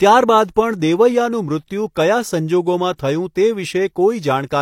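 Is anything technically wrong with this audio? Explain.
Yes. At 2.98 s there is pre-echo: the transform codec spread quantisation noise across its block, so noise sized for a sharp attack also fills about 11 ms before it. A brief hiss leads into a softened onset, unlike a click, which is a single sharp tick with no smearing.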